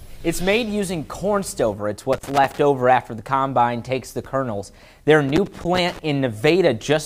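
A worn or dirty contact is intermittently making and breaking, chopping the signal, which is loose connector crackle; it breaks in as an irregular scratchy burst from 2.13 to 2.58 s and again, longer, from 5.29 to 5.99 s.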